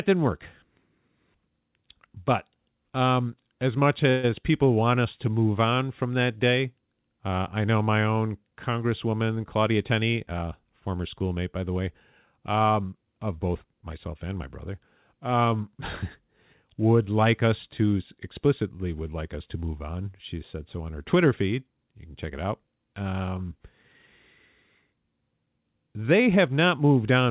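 A call audio freeze at 4.1 to 4.31 s in this speech clip, right after "um as much", likely comes from packets held up in transit until the jitter buffer ran dry. The receiver bridged about 132 ms with a fading continuation of the last sound, then resumed intact at "people want us to". A jitter buffer speed-up from 9.06 to 10.48 s, just before "former schoolmate by the", trims pitch-period slices totalling roughly 150 ms, so the voice runs at about 109% speed with unchanged pitch. The narrowband G.711 call path leaves nothing above 4 kHz.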